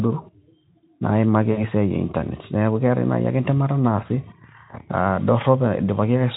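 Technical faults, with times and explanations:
1.51–1.68 s, VoIP packet loss concealed by the speech codec: about 60 ms lost, fitting three 20 ms Speex frames. The decoder repeated its last pitch and filter at falling gain, so the speech smears into a fading buzz or coloured noise.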